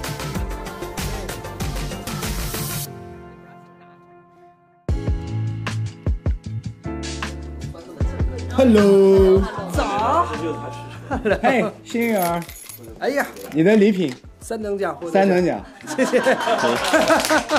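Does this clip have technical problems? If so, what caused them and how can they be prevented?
No, the signal shows no dropouts, distortion, level jumps or other technical faults anywhere in the recording, so there is nothing here to trace to a cause or prevent.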